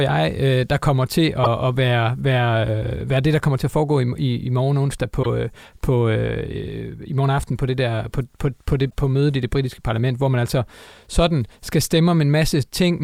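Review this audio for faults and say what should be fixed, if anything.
Damaged data in a compressed stream causes brief glitches at 1.41–1.47 s, 5.20–5.26 s and 8.87–8.93 s. Corrupted bytes there make the decoder misread frames and lose sync until the next frame header. Verify transfers with checksums to prevent this.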